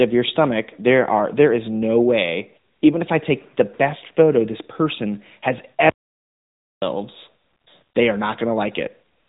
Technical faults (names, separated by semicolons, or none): AMR narrowband mobile codec; audio dropout to silence